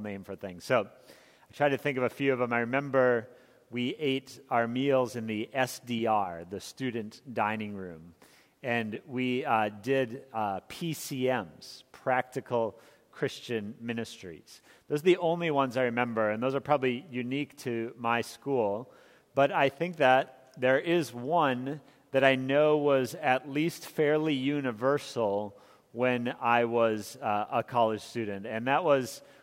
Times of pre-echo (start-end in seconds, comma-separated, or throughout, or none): none